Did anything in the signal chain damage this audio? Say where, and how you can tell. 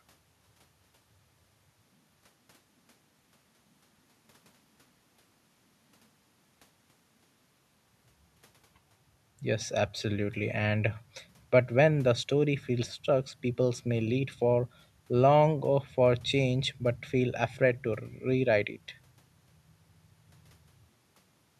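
No, nothing along the chain has harmed this speech, and the only thing underneath it is the room's own background noise, sitting about 45 dB below the talking, which belongs to the recording itself.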